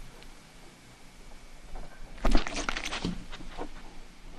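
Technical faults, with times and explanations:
No technical faults detected.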